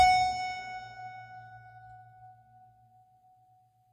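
Throughout the music, the treble sounds bright but synthetic, with plainly audible codec damage and nothing above 18.4 kHz. This is likely HE-AAC compression at a low bitrate, near 20 kbps. The top band is rebuilt from copied lower bands, so it sounds gritty and metallic.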